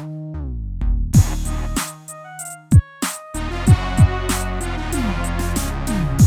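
No technical faults can be heard anywhere in this recording, and the signal stays intact throughout.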